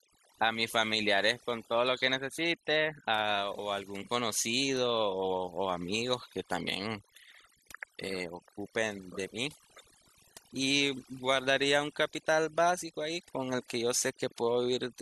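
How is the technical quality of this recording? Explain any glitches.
The recording is compromised by overdone noise removal running throughout. The noise reducer was set too strong, cutting any frequency band near its noise estimate along with quiet parts of the voice, so the background drops and breaks up into twinkling specks.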